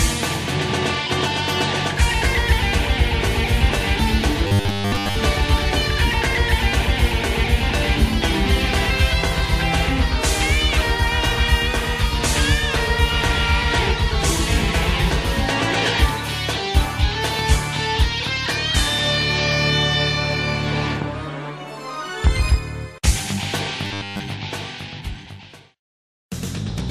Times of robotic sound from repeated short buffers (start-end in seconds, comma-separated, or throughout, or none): 4.47-5.15, 23.85-24.20